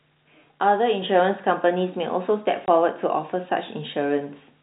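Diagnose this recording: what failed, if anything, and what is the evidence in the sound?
Microphone volume stepped up at 1.02 s, in call processing acting on the device. Speech and background noise rise together by about 5 dB in a single step. That points to software judging the microphone too quiet and raising the input volume at once.

Packet loss filled with silence at 2.66 to 2.68 s, on the network. A 20 ms gap with hard edges cuts into the telephone-band G.711 speech, which fits one lost 20 ms packet that the receiver replaced with silence instead of concealing it.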